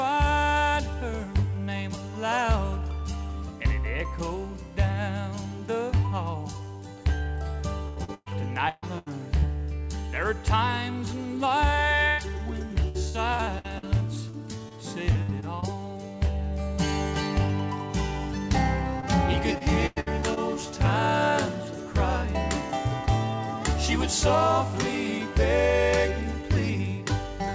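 Repeated packet loss (robotic sound) hits from 7.88 to 9.44 s, 12.88 to 15.64 s and 19.00 to 20.38 s. Lost packets are patched by stretching the last sound, so it turns choppy and robotic. At 12.08 s, a burst of packet loss drops about 100 ms. The last sound is held and fades, then the audio jumps ahead. The G.722 call path shows no content above 8 kHz.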